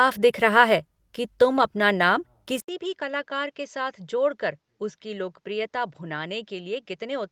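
At 1.57 to 1.63 s, between "दिख रहा है कि" and "अपना नाम", lost packet rebuilt from error correction: 40 ms plays from low-bitrate copies, briefly rough and noisy.

At 2.60 s, after "अपना नाम", the input likely switched to a poorer device: 80 ms of silence, then duller sound capped near 7.6 kHz, about 10 dB quieter, with faint new noise.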